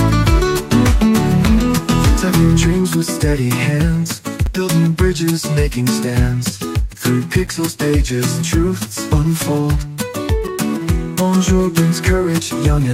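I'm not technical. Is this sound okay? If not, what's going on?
No, there's a gap between chunks: tiny hard-edged silences of about 6.5 ms at 1.46, 4.46, 7.47 and 10.48 s, every 3 s where pieces join.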